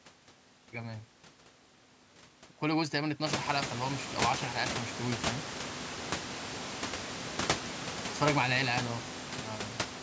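Nothing's technically wrong with this speech recording: it carries the band-limited sound of call microphone processing, with nothing above 8 kHz, and the room noise picks up by about 20 dB at roughly three and a half seconds but stays about 9 dB under the talking.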